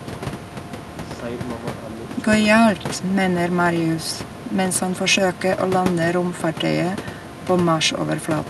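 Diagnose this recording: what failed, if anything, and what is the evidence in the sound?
Nothing failed in this recording.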